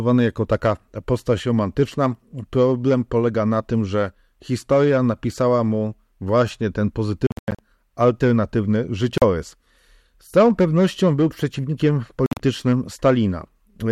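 Speech drops to silence at 7.27–7.59, 9.18–9.22 and 12.26–12.40 s, likely a Bluetooth dropout. It resumes further on rather than where it stopped, unlike a stall.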